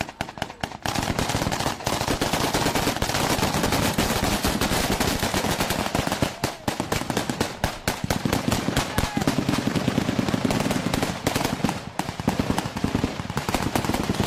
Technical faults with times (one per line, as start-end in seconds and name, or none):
none